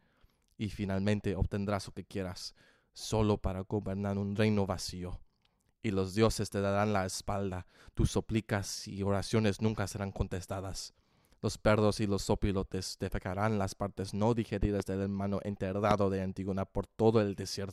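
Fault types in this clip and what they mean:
Loud pop: Sharp pops jump well above the sound, which carries on underneath. A quick double pop at 14.63–14.84 s peaks about 15 dB over it. A single pop at 15.91–15.95 s peaks about 20 dB over. The likely cause is a sudden voltage spike entering the signal chain.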